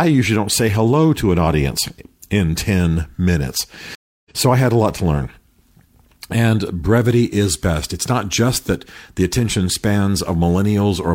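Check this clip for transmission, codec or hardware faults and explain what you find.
A stream reconnect breaks this speech clip from 3.95 to 4.31 s. The connection dropped, the player fell silent for about 0.3 s, then reconnected and started a new decoder mid-stream. The speech resumes roughly a fifth of a second further on, so a short stretch is skipped.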